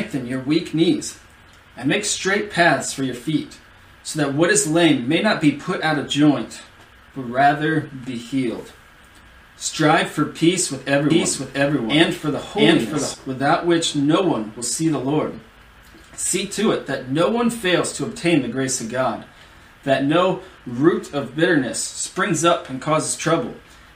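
From 11.10 s to 13.14 s the audio is doubled: a second full-band copy trails the original by roughly 0.7 s, at about the same level, with no decay or room colour, so everything in that stretch is heard twice, out of step. The copy cuts in and drops out abruptly at both ends. This is a doubled audio track, likely caused by the signal being picked up again through a slower path or by two unaligned copies left overlapping in an edit.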